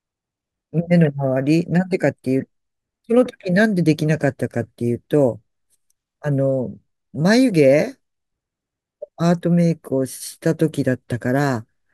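Speech recording; nothing wrong with it technically.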